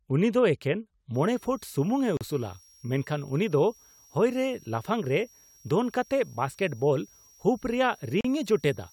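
A switching power supply running in an audible burst mode or beating with another one adds a switching supply whistle from 1.14 s to the end: a thin tone drifting between 5.59 and 5.75 kHz, roughly 30 dB below the speech. Separately encoded pieces joined without trimming their start delay and end padding leave a gap at each join, at 2.17 s and 8.21 s, six seconds apart. Each is a 37 ms gap with smeared edges, after which the speech resumes where it stopped.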